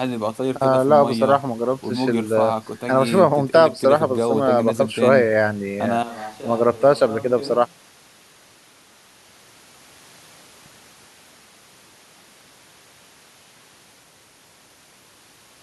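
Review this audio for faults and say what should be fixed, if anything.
From 6.03 s to 14.03 s the speech suddenly turns roomy and hollow, thinner in the low end and about 15 dB quieter, with room noise only about 20 dB below the voice. That's likely a switch to a distant microphone after the close mic dropped out, and it snaps back at 14.03 s. Keep an eye on the close mic's signal while recording and run a backup lav or recorder so any dropout can be patched cleanly.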